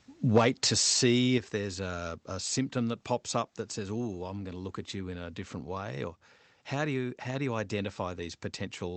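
Speech, carried over a call path whose audio tops out around 8 kHz, consistent with a wideband call codec. From 0.36 to 0.93 s the loudest syllables have a harsh, crackling edge with flattened waveform peaks, the signature of microphone overload. The likely cause is input gain set high enough to drive the peaks about 5 dB past the converter's full scale, so their tops are sheared off. The affected portion is small, on the order of one percent of samples, but concentrated on the strongest peaks, which is why the distortion sounds like grit rather than constant fuzz. There are also two microphone volume step-downs, where voice and background drop together in a single step: about 4 dB at 0.38 s, just after the distortion begins, and about 6 dB at 1.38 s. That pattern points to an automatic gain control reacting to the clipping by lowering the device's input level. Because each cut lands in one step rather than a gradual fade, the level changes are sudden.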